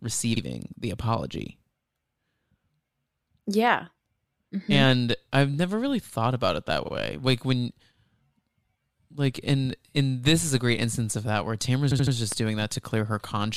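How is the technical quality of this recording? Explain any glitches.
The recording has clear technical glitches: two stretches of repeated frames and one loud pop near the end.

Repeated frames occur at 0.36–0.41 s and at 11.90–12.14 s. A short run of compressed audio was delivered more than once, so the decoder replays it. In the first, a 52 ms block plays one extra time. In the second, a 78 ms block plays three extra times, adding about 235 ms. Both are heard as a stutter. On a waveform, identical segments sit side by side. A spectrogram shows the same pattern tiled.

A loud pop sits at 12.32–12.34 s, peaking about 10 dB above the speech, which continues underneath. It is heard as one sharp, brief crack. The likely cause is a sudden voltage step, such as a switch, static or a driver glitch, shaped by the circuitry after it. The waveform shows a tall, narrow spike standing well above its surroundings. 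On a spectrogram it appears as a bright vertical stripe spanning the whole frequency range.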